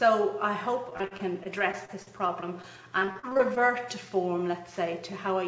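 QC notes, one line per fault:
0.90–3.58 s: repeated packet loss (robotic sound). Twenty-two short holes punch through this stretch, none longer than 40 ms. Each one is patched by stretching the sound that came just before it. The patches add up to about 461 ms, and roughly 380 ms of real audio is simply gone. About 17% of the span is filler. The holes come close together, so the sound turns choppy. The G.722 band limit at 8 kHz sits underneath.
3.60–4.15 s: jitter buffer slow-down. Right after the losses, the receiver rebuilds its reserve. It repeats single pitch periods and small slices of pause, one after another. This adds about 50 ms, so the passage plays at 92% speed. Pitch stays put while the timing drags. Sounds feel drawn out and slightly sluggish.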